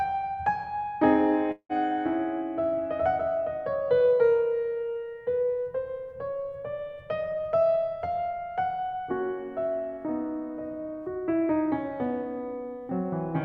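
At 1.51 s the music turns into a fading buzz that extends its last sound for 180 ms, followed by 50 ms of silence. Playback resumes at 1.72 s with 180 ms skipped. This is likely a long network dropout, concealed until the receiver gave up.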